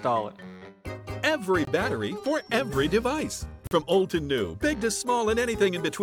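Gaps between stream segments at 1.65–1.67 s and 3.67–3.71 s: segment timestamps leave 23 ms and 42 ms holes, filled with hard-edged silence, with no audio lost.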